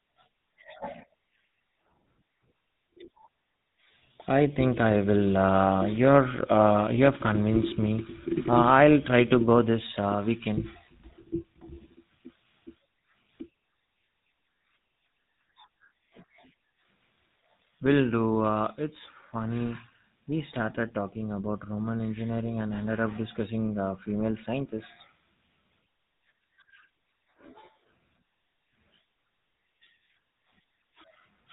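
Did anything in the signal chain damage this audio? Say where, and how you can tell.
Yes, at the codec stage: the speech has been through a GSM full-rate codec for the whole clip. The band stops at 4 kHz, and the voice carries a plainly audible buzzy, gravelly roughness. That comes from pulse-train excitation that keeps only every third sample, which fits a 13 kbps stream.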